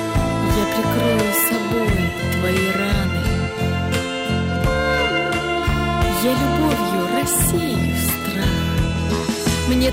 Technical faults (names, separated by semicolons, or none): hard clipping